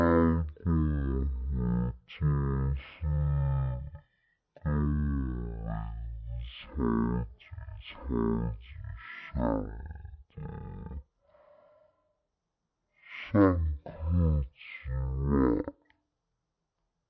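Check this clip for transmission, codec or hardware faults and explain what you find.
The speech has a wrong sample rate fault throughout: everything runs at one third speed and sits about 19 semitones low, which fits 48 kHz audio played at 16 kHz without conversion. On a spectrogram, harmonics and formants crowd into the lower third, with syllables stretched threefold in time.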